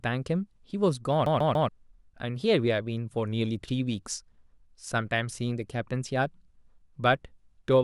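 From 1.26 to 1.69 s the speech gets caught in a CD stuck on one turn. A slice of about 142 ms plays three times in a row. Each jump back brings a brief mute. The cause is the pickup being thrown back one track at the same point on each rotation, as a scratch would do. The result is a rapid, evenly spaced stutter. Normal playback then resumes.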